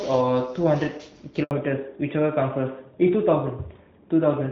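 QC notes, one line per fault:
1.43–1.51 s, handover gap: the speech dies away within a few tens of milliseconds, then complete silence fills the rest of the 80 ms gap while the call switches networks and no speech frames arrive. Unlike a packet-loss glitch, nothing is smeared, repeated or concealed. The audio is simply missing until the new link starts.
1.51 s to the end, fallback to narrowband: straight after the gap, everything above 4 kHz vanishes and the speech turns duller and rougher. The earlier clear wideband sound gives way to what fits AMR-NB at 12.2 kbit/s replacing AMR-WB at 12.65 kbit/s. Unlike a steady band limit across the whole clip, the change starts at the handover and persists.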